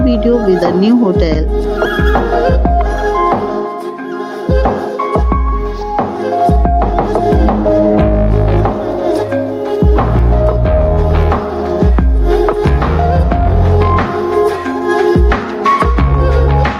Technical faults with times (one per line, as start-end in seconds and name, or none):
0.00-16.80 gain pumping